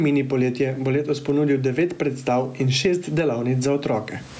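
Gain pumping runs through the whole clip. The gain swings by roughly 15 dB. Loud and quiet parts sound squashed together. The likely cause is input gain set far too high, with a fast limiter clamping each peak.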